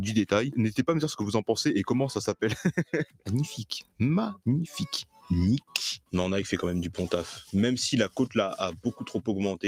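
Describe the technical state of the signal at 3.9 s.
At 3.9 s you're right in the middle of a spot where the sound is cut by the noise suppressor, running from about 3.82 to 4.0 s. The suppressor decided this stretch was noise and pulled it down harder than its surroundings, bottoming out about 18 dB lower. Anything sustained or decaying there just sinks, and its tail gets clipped short, while anything with a sharp onset mostly punches through. It reads as a brief dip.

That dip sits on top of a broader problem: a noise suppressor applied to music or sounds, active across the whole clip. It's a speech-oriented processor treating steady tones, ambience and reverb as noise, so its gain keeps swinging by roughly 10 dB. Attacks survive while held material and reverb tails get pushed down, which gives the audio a pumping, fluttery, thinned-out character around this moment as well.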